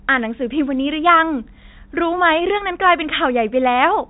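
Speech over a G.711 telephone path, band-limited at 4 kHz as that format requires, with no technical faults present.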